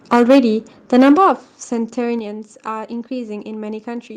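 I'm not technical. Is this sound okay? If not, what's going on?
No. The microphone's input level was likely set too high, so the loudest moments overran what the recording could hold. This is microphone overload: between 0.12 and 0.4 seconds, and again from 0.94 to 1.31 seconds, the tops of the speech are chopped off, giving a harsh, crackly edge.

The microphone volume was also stepped down, likely by the call software reacting to that loudness and lowering the input in one jump. At 0.16 seconds and again at 2.19 seconds, the speech and background suddenly become quieter, as if someone turned a knob down.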